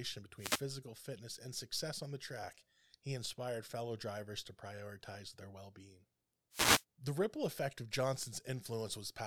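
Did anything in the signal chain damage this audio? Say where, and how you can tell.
Yes: two brief swishes of static, 0.37–0.64 s before "fitness and success on" and 6.51–6.84 s after "prioritize their well being", are wireless microphone noise hits, where reflections cancelled the FM radio signal and receiver noise broke through.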